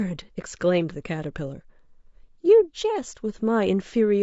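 From the first moment to the end, the speech has a rough, grainy texture, with a hiss filling the gaps between the harmonics and a top end that sounds thin and somewhat artificial. That's plainly audible low-delay AAC compression, likely AAC-ELD, the kind used on video calls. Its short frames can't separate pitch harmonics cleanly, and the damage here fits a bitrate of around 32 kbps.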